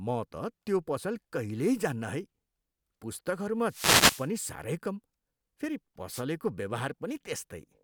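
At 3.67 s the speech gets hit by a wireless microphone noise hit lasting until 4.29 s: a burst of hiss and static swishes over the voice for about 0.6 s. That's the FM radio link fading as reflected signals cancel at the receiver, so its noise floor jumps up. A shorter one lands at 6.11 to 6.22 s, just over a tenth of a second, heard as a quick static swish.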